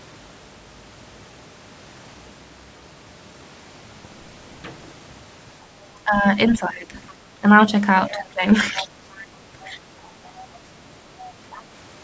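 From 5.95 to 6.94 s the talker's speech is suppressed in double talk. The level sinks by roughly 15 dB in patches. The likely cause is an echo canceller that cannot tell the talker from the loudspeaker echo while both sides speak, so it turns everything down. Shorter dips follow at 7.41 to 7.47 s and 9.66 to 9.83 s, each about 10 dB. The deepest cut runs from 8.11 to 8.89 s, at around 20 dB.

From 8.81 to 9.26 s the other side's voice leaks through. It sits roughly 20 dB under the talker, a second voice behind the speech. This is likely residual echo: the far end plays on the device's loudspeaker, and the canceller leaves some of it in the microphone signal. Fainter scraps return at 10.05 to 10.11 s, about 35 dB down, and at 11.51 to 11.60 s, about 25 dB down.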